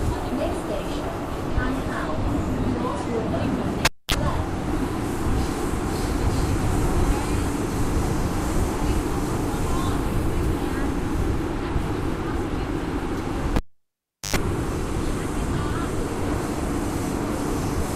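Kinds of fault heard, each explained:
Cable pulled and plugged in: a live lead is yanked and reinserted, giving a pop, a dropout of about 240 ms at 3.85 s and 750 ms at 13.56 s, then a 50 Hz buzz burst as the tip reconnects, unlike a plain dropout, which has no hum.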